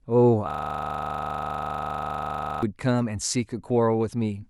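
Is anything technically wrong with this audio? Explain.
Yes. From 0.51 to 2.63 s there is a system hang loop. The system froze while the sound hardware kept replaying its buffer. One 40 ms slice of the speech repeats about fifty times. This produces a rough, rattling buzz at 25 Hz.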